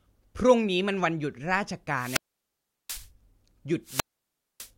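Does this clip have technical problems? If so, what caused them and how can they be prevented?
Yes. Wireless microphone squelch dropouts occur at 1.95 to 3.10 s and again at 3.84 to 4.71 s. In each, hiss briefly rises as the radio link from the analogue FM transmitter fades. The receiver's squelch then cuts the output, leaving near silence for about 0.73 s in the first event and about 0.60 s in the second, before the speech returns. Keeping the transmitter in clear line of sight and within range of well-placed receiver antennas, and using a diversity receiver, prevents these dropouts.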